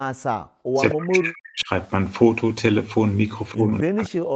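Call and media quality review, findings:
Background gated by the echo canceller, 0.07 to 0.47 s: room sound drops by about 40 dB for roughly a third of a second, as the canceller clamps the microphone while the loudspeaker plays.

Speech suppressed in double talk, 0.75 to 1.69 s and 3.54 s to the end: talker dips by up to around 40 dB. Likely cause: the canceller, unable to separate local speech from far-end echo, attenuates both.

Echo leak, 0.9 to 1.05 s: delayed copy of the speech, about 10 dB down and trailing by 258 ms. Likely residual loudspeaker pickup that the echo canceller failed to remove.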